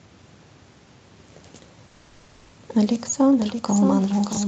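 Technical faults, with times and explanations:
Throughout: doubled audio track. A second full-band copy of the speech trails the original by roughly 0.7 s, about 5 dB quieter, with no decay or room colour. This likely comes from the audio being captured again through a slower path and mixed back in.
1.87 to 2.54 s: call audio freeze. The speech stalls and the last sound is stretched into a fading buzz for about 650 ms, then resumes where it stopped with nothing lost. This is likely delayed packets draining the jitter buffer, which adds a 650 ms gap.
4.33 to 4.37 s: chunks out of order. One 21 ms chunk plays one chunk late, after the chunk that should follow it. Nothing is missing, but the misordering leaves three hard joins, heard as a brief jumbled moment.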